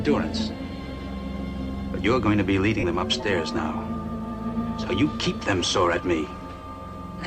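At 2.79 to 2.84 s there's a stretch of lost LE Audio frames, about 37.5 ms, which fits roughly five 7.5 ms LC3 frames. The decoder patches it by replaying the last spectrum with scrambled signs, so the sound briefly turns into a noisy smear that starts to fade.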